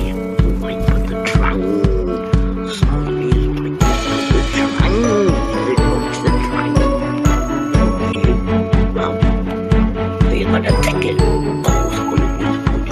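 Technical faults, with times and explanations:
8.12–8.16 s and 12.08 s, corrupt frame decoded: Short chirps, blips or bursts of noise cut in, peaking around -10 dBFS, then around -15 dBFS. Damaged compressed data was decoded anyway. Misread codes put energy at wrong frequencies, over one frame hit, then a few.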